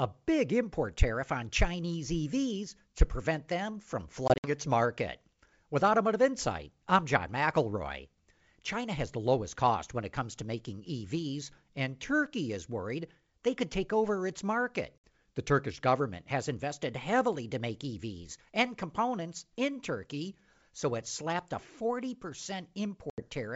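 Packet loss on an ADPCM call cuts hard silent holes at 4.28–4.50 s (about 100 ms, in gaps up to 60 ms), 14.99–15.03 s and 23.10–23.27 s. The decoder's predictor and step size drift out of step, so speech returns slightly distorted before settling.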